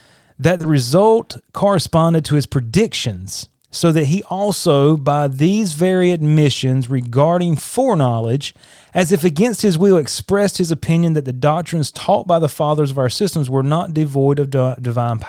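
At 0.57 to 0.61 s and again right after at 0.61 to 0.65 s, just before "result corresponded to his", there's short concealed packet loss: two 20 ms chunks arrived too late, and the decoder papered over them by extending the preceding sound, leaving a quick smeared wobble.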